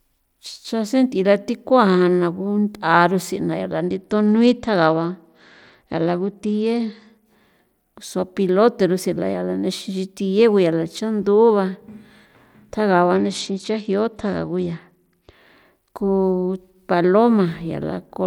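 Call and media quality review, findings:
Bluetooth SBC bit pool drop, 3.8–7.26 s and 13.13–15.33 s: treble goes dull, gritty noise creeps in, then recovers. Link congestion, so the phone starved the SBC encoder. Fits bit pool 31 down to 12, around 88 kbps, with top sub-bands dropped.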